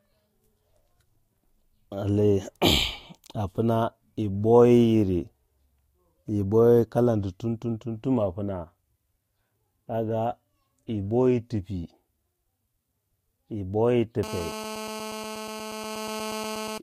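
From 14.23 s to 16.78 s, GSM phone buzz rasps steadily under the speech, about 11 dB down: a nearby 2G phone on a call bursts 217 times a second and the circuitry rectifies it. A spectrogram shows even stripes at 217 Hz and harmonics.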